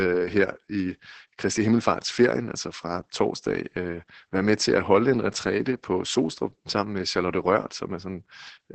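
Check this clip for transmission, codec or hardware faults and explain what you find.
Opus voice compression runs through the whole clip, from start to finish. The codec is working in its SILK linear-prediction mode: it models the vocal tract with a filter and spends very few bits on the excitation driving it, and it caps the audio at wideband, so nothing above about 8 kHz survives. The coarse excitation makes the speech sound muffled, hoarse and faintly robotic, and the heavy damage fits a bitrate of roughly 10 kbps.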